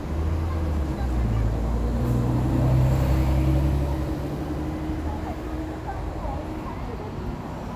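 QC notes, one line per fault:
No faults found. Nothing in the sound calls for a QC line.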